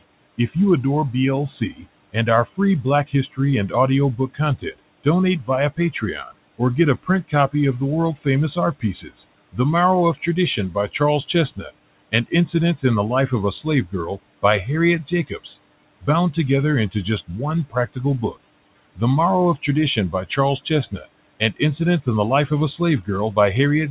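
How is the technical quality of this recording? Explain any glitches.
The recording has one recurring problem, speech cut by the noise suppressor, heard from the very start and through most of the clip. Room noise sits about 20 dB below the speech, and the band stops at 4 kHz, which points to a narrowband G.711 mu-law call path.

Speech cut by the noise suppressor occurs first between 0.01 and 0.56 s, where about a tenth of a second of speech is hit, and again from 1.6 s to the end. The suppressor mistakes low-level speech energy for background and attenuates it by up to about 20 dB along with the room noise. Soft consonants and word endings sound swallowed or faint, as if briefly gated out.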